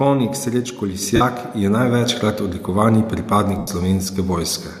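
Microphone volume stepped up at 1.02 s: the call software judged the input too quiet and raised the device's capture gain in a single jump of about 4 dB. Speech and room background get louder at the same instant, with no fade.

Lost LE Audio frames from 1.16 to 1.21 s: a 45 ms gap in the Bluetooth stream, which fits six 7.5 ms frames. The decoder, likely LC3, concealed it by repeating the last spectrum with scrambled phase, so the speech briefly turns into a hissy, noisy smear before clean audio returns.

Microphone volume stepped up again at 2.04 s, this time by about 3 dB. Voice and background step up together, the same abrupt gain change as the first.

Lost LE Audio frames from 3.58 to 3.68 s: a longer 90 ms loss, consistent with twelve frames. The concealment smear lasts only a few frames before it fades, so the sound dies away toward silence before normal decoding resumes.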